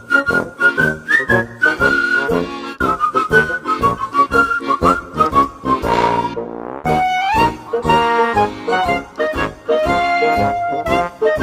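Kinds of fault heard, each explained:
Nothing here stands out as a fault; it's just the recording, with no dropouts, glitches or other problems to point to.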